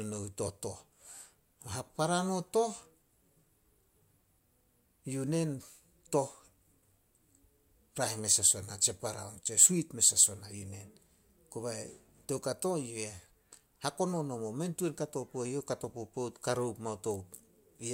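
A speech recording with nothing technically wrong anywhere in it, so there are no times or causes to point to.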